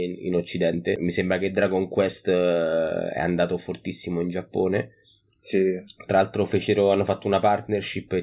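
Listening through the speech recording, nothing technical stood out.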